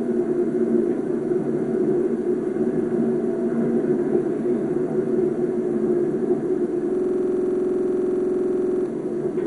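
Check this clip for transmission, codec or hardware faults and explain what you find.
Two faults are audible: heavy codec damage across the whole clip, and a stuck-buffer loop near the end.

MP2 compression runs throughout. Nothing reaches above 11.2 kHz, so the audio sounds dull, and what remains has a gurgling, granular roughness as sub-bands flicker in and out. The likely cause is MPEG Layer II coding at a low rate, around 56 kbps. The encoder starves its 32 equal sub-bands of bits, so it switches off the top ones and coarsely quantises the rest. A plain low-pass filter would sound dull but clean. This sounds dull and grainy, with fluttering band edges.

A system hang loop occupies 6.95 to 8.86 s. A single 46.4 ms slice of sound repeats identically about forty times at 21.5 Hz, which fits a 2048-sample buffer. The host or driver stopped supplying data, and the output hardware kept replaying the same ring buffer. 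At this length it comes across as a rapid machine-gun stutter rather than a steady buzz. Unlike packet-loss glitches, the repeats are perfectly identical and evenly spaced, with no gaps or concealment smearing.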